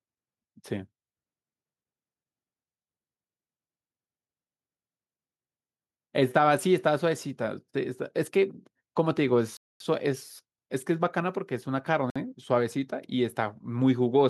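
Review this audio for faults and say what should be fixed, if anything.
The speech drops to dead silence twice, from 9.57 to 9.80 s (about 233 ms) and from 12.10 to 12.16 s (55 ms), then resumes where it left off. These gaps are likely a Bluetooth stall: radio interference delayed packets, the headphone buffer emptied, and playback waited for retransmissions. Keeping the phone close to the headphones with a clear line of sight, away from busy 2.4 GHz sources, would prevent it.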